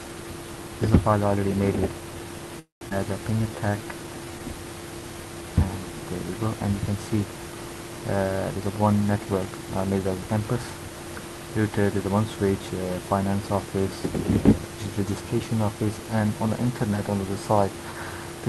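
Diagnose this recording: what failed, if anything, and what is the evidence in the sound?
Network and jitter buffer: a call audio freeze runs from 2.59 to 2.84 s. The last sound is carried on as a decaying fill, with about 150 ms of silence inside the 217 ms gap, and playback then resumes where it stopped. The likely cause is held-up packets emptying the jitter buffer.

Jitter buffer: a skip ahead follows at 2.89 to 2.94 s. Playback jumps forward with only about 16 ms of joining material, and roughly 150 ms of audio is dropped. This trims back the delay the freeze added, splicing the two sides almost directly.

Jitter buffer: a slow-down from 3.36 to 4.40 s plays at 85% speed with unchanged pitch. Repeated pitch periods and bits of pauses add 158 ms, so sounds are drawn out as the receiver rebuilds its reserve.

Jitter buffer: a speed-up from 8.55 to 10.19 s runs at 113% speed at the same pitch, sounding hurried. 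The receiver cuts short pieces of one or a few pitch periods, removing roughly 200 ms to bring an overfull buffer back to its target delay.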